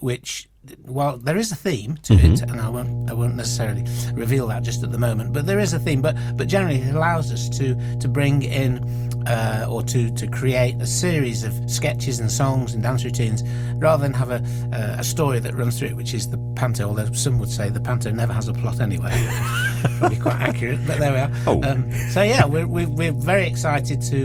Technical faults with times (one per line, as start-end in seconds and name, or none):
2.11-24.25 mains hum